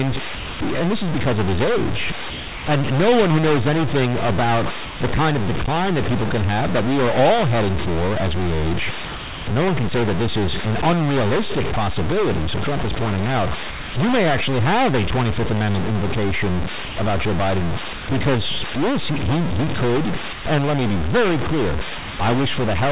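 A distortion runs through the whole clip. It sits on top of the speech, and the pauses fill with a gritty noise instead of going quiet. This points to a stuck bit, likely one data bit held at a fixed value. About half the samples come out wrong by that bit's weight, so the error follows the waveform. Near silence, the correct value of that bit keeps changing with the sign of small values while the bit stays fixed, which makes the hiss.

Short stretches of the speech vanish and are replaced by steady, featureless noise. This happens from 0.35 to 0.59 s, 2.3 to 2.66 s, 4.85 to 5.0 s, 9.05 to 9.47 s and 13.7 to 13.94 s. The gaps run from 150 to 420 ms. This is sound dropped by the voice detector, likely because part of the speech was judged to be background. Sending stopped, and the receiver filled in comfort noise until the detector fired again.

From 16.85 to 18.08 s the speech turns choppy. 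Pieces drop out, about 270 ms in total. This is sound chopped by the voice detector. The sender likely switched on and off several times in this stretch. Parts of the speech were swapped for comfort noise.

Two more dropouts follow, at 20.33 to 20.45 s and at 21.98 to 22.19 s. Each lasts 120 to 210 ms. In both, the speech again gives way to smooth noise. They are further cases of sound dropped by the voice detector.

Throughout, nothing above 4 kHz is heard. This fits the G.711 mu-law call path.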